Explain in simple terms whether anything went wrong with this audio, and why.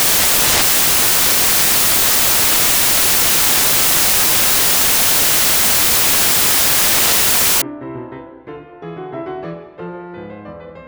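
Yes, something went wrong. From the start until about 7.62 seconds, the music was read with samples built from the wrong bytes: each sample's pieces were joined in the wrong order or position. The tiny, jittery details became the loudest part, so the music turns into harsh, loud hiss.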